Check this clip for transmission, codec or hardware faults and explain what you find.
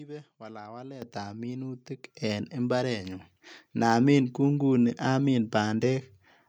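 There's one fault here, and it happens twice: the microphone volume stepped up at 1.02 s by about 10 dB, then again at 2.04 s by about 8 dB. The call software judged the mic too quiet and bumped its input gain, so voice and background jump louder together, abruptly.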